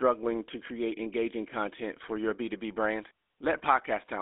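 GSM full-rate codec damage runs throughout this speech: a vocal-tract model driven by sparse regular pulses, fitting 13 kbps, leaves a buzzy, gravelly roughness within a 300 Hz to 3.6 kHz band.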